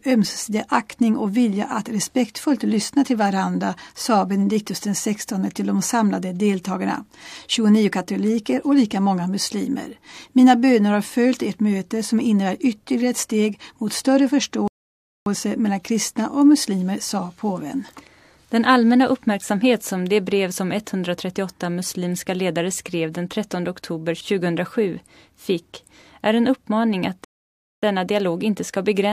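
The player twice ran out of downloaded audio and had to wait for more, producing a rebuffering stall at 14.68 s and again at 27.24 s. Each time the sound drops to silence for about 0.58 s, then picks up exactly where it stopped, with nothing skipped.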